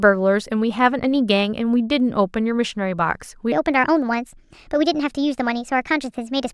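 From 3.52 s right through to the end, the speech jumps into a section at the wrong speed. It's running about 1.3 times too fast, so the voice suddenly sounds hurried and chipmunky, sitting roughly five semitones higher than before, with pitch and pace shifting together at that exact moment. The likely culprit is that stretch being played back or edited against the wrong clock, so its timing never matched the rest.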